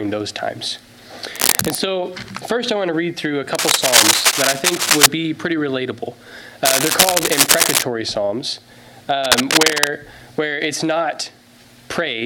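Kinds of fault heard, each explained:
Cable scratch noise: bursts at 1.34–1.77 s, 3.55–5.06 s, 6.65–7.83 s and 9.24–9.88 s of dense, ragged scratching about 5 dB above the sound, likely from a worn cable or connector being moved so its contact resistance jumps erratically.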